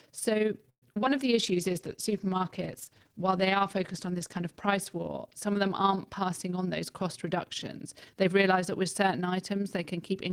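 From 0.69 to 1.08 s the speech breaks up with repeated packet loss, giving a robotic sound. Five gaps follow one another closely, the longest 126 ms. About 152 ms is patched by stretching the previous sound, and 80 ms is simply missing. Concealment covers 39% of the stretch, so it sounds choppy.

At 1.35 s a jitter buffer slow-down begins and lasts until 2.29 s. The receiver repeats short pitch periods to rebuild its reserve, adding 66 ms. Speech runs at 94% speed without any change in pitch. Syllables sound slightly drawn out.

At 1.39 s a call bitrate drop also sets in and lasts until 6.39 s. The coarser coding points to the encoder falling from about 32 to about 15 kbps. The lowest rate holds for 3.13 s. The speech turns rough and watery, with the top end dulled.

From 6.56 to 8.81 s a jitter buffer speed-up trims out small slices of pitch periods to shed surplus delay, roughly 150 ms in all. 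Speech runs at 105% speed at the same pitch. The pacing sounds a little hurried.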